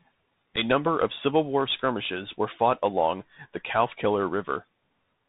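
The whole clip carries the Bluetooth CVSD headset codec. Speech is confined below 4 kHz, s sounds turn scratchy, and a granular hiss sits underneath, consistent with a 64 kbps link.

From 0.56 to 0.58 s, just before "number of", there is unconcealed Bluetooth headset packet loss. A gap of about 7.5 ms cuts out abruptly, pointing to a single lost packet.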